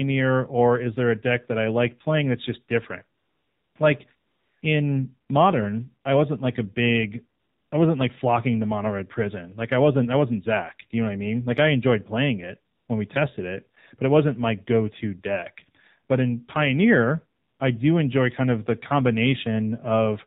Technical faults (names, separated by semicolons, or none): AMR narrowband mobile codec; AMR comfort noise